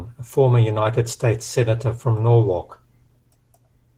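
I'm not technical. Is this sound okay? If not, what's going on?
No. Opus voice compression affects the whole clip, from start to finish. To save data, the speech was squeezed so hard that the coder kept only a rough description of the voice and the upper treble, so it sounds plainly hoarse, slightly robotic and dulled throughout.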